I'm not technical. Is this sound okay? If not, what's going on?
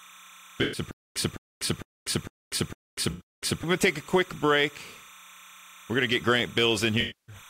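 No. Three separate problems can be heard.

Timecode bleed runs through the whole clip: a quiet, steady chirping warble that flips between two pitches around 1 and 2 kHz, ticking 30 times a second. It isn't a low hum. It's a sync signal from nearby equipment leaking into the recording.

AAC frame loss with concealment appears at 0.62–0.81, 3.10–3.22 and 7.00–7.36 s. Pieces of the compressed audio went missing, and the player guessed to fill the holes, so the speech turns smeared and noisy for about 0.11 s each time, and about 0.28 s at the end. Nothing repeats.

A stutter with silent gaps runs from 0.91 to 3.64 s. The same 0.21 s snippet plays six times, each followed by about 0.24 s of dead silence, repeating every 0.45 s. That exact repetition sets it apart from the smeared patches. A stalled stream is the likely cause, and the speech meant for that stretch is lost.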